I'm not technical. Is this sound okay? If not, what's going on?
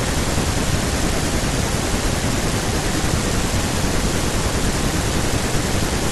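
No. At 0.70 s there are compressed frames skipped: a short stretch of the speech, roughly a sixth of a second or about seven 23.2 ms frames, never plays because those pieces of the file were missing or damaged, so it jumps ahead.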